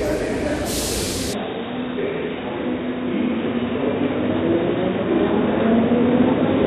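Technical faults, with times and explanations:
1.33 s to the end, input switched to a poorer device: the sound suddenly turns dull and boxy, with nothing above 3.8 kHz and a new background noise about 30 dB below the signal, at roughly the same loudness and with no gap. This is likely a switch to a narrower-band microphone or headset profile. On a spectrogram, energy above 3.8 kHz cuts off abruptly at 1.33 s, and a faint noise floor appears; the waveform shows no dropout.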